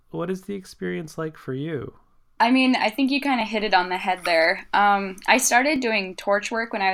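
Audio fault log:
1.05–6.93 s, clock drift buffer slips: two devices in the chain are likely running on separate clocks that disagree by something like 500 parts per million, so the buffer between them slowly drifts until a few dozen samples are dropped or repeated to catch up. Each slip breaks the waveform abruptly, heard as a short click in the speech that returns at a steady interval of about 1.18 s across this span.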